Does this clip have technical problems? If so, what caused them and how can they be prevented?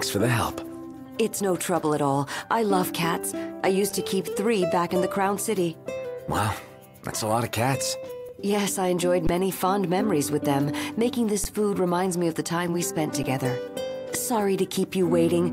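Yes. Underruns with a held sample occur at 3.90, 8.29, 9.27 to 9.29, 11.44 and 13.23 s, lasting 4, 3, 20, 10 and 10 ms. Each time the output buffer emptied, so the converter froze on its last value. The waveform shows a short flat line, and the spectrogram shows a thin gap where content stops. The missed audio was discarded rather than resumed when playback returned. Enlarging the playback buffer and giving the audio thread real-time priority would prevent this.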